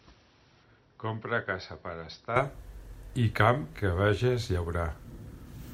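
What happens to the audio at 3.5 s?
Nothing goes wrong at 3.5 s; the speech there runs on intact, with no dropout, click, distortion or other fault at that moment.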